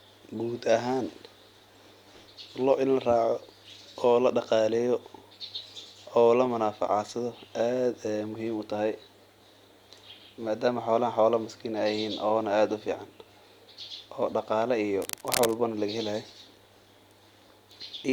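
At 14.97 s, a burst of cable scratch noise begins and runs until about 15.58 s, roughly 0.6 s in all. It sits only a little below the level of the speech, so it is clearly audible as a dense, uneven rustling and scratching laid over the sound. The likely cause is a worn cable or connector being moved, with its contact resistance fluctuating rapidly and modulating the signal path for that moment.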